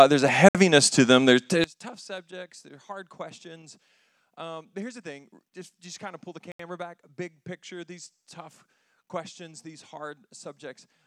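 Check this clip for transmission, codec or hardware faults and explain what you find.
Two kinds of fault are present: two brief dropouts and a polarity problem that persists from early on to the end.

Bluetooth stall: from 0.49 to 0.55 s (62 ms) and from 6.52 to 6.60 s (76 ms), the sound cuts to silence and then resumes. The likely cause is radio interference delaying packets until the headphone buffer emptied, pausing playback until retransmissions arrived.

One channel inverted: from 1.64 s to the end, the level drops by about 23 dB and the sound becomes faint. This is likely one stereo channel with reversed polarity, so content common to both channels cancels in the mono sum.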